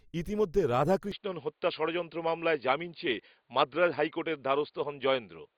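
From 1.12 s to the end, the speech abruptly turns duller and more boxed-in, with nothing above 4.8 kHz, and a faint new background noise sits far below the signal. There is no gap at the change and the loudness stays about the same, so mainly the tone shifts. This is most likely an input switched to a poorer device mid-recording, such as a second microphone or a headset's call profile, with its own limited bandwidth and noise floor.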